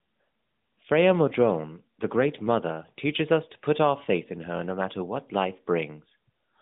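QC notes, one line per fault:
No faults heard in this speech clip.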